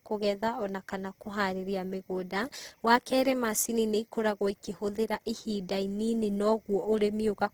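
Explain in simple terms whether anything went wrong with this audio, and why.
Something did go wrong: from start to finish, the speech carries Opus compression damage that is plainly audible. The likely cause is heavy squeezing by the Opus codec in its music mode. When it runs short of data, it fills gaps with borrowed or noisy sound, so the voice turns rough and grainy. It swirls less than MP3 does, and because the sound stays full-range instead of muffled, the encoder never fell back to its speech mode.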